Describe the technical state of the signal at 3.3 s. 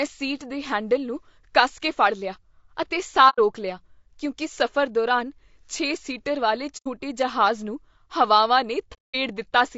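AAC frame loss with muting runs from 3.29 to 3.39 s, a gap of about 90 ms that fits roughly three lost frames. The decoder zeroed their spectrum, so overlapping windows fade the speech out and back in, leaving a soft-edged hole.

Low-delay AAC compression is plainly audible around that moment, as throughout, and is likely AAC-ELD at 32 kbps. At this low bitrate the speech sounds rough and grainy, with noise filling between harmonics and a thinned, synthetic-sounding top band.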